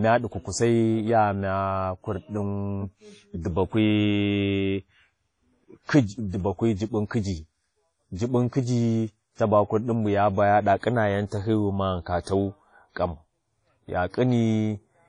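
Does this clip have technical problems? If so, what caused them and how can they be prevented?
Yes. Throughout the speech, nothing sounds above about 10.1 kHz, and the band-limited character points to low-bitrate audio saved at a high bitrate. The likely cause is an earlier low-rate encode, consistent with something like 32 kbit/s WMA, later re-saved as a 192 kbit/s MP3 that cannot restore the removed content. Unlike a plain low-bitrate file, the file's high bitrate makes it look better than it sounds, though the damage remains audible. Always encode from the original uncompressed source.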